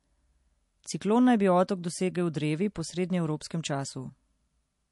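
Throughout, nothing is heard above 11.3 kHz, and the speech sounds watery and swirly. This is likely MP3 compression, consistent with a bitrate around 48 kbps.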